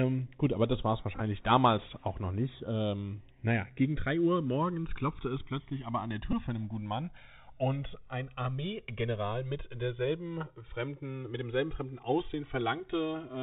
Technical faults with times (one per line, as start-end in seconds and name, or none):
0.00-13.43 channels drifting apart
0.00-13.43 Bluetooth CVSD headset codec
1.16-1.21 Bluetooth headset packet repeated
6.32-6.34 Bluetooth headset packet repeated